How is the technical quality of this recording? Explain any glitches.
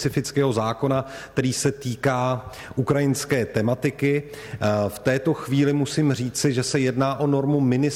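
A single glitch stands out. From 2.56 to 2.60 s there is a brief glitch, lasting about 30 ms, that breaks abruptly into the sound. This is damaged data in a compressed stream: a short stretch of the encoded file is corrupt, so the decoder misreads or rejects the frames there, loses its sync with the frame structure and has to search for the next valid header before normal audio resumes.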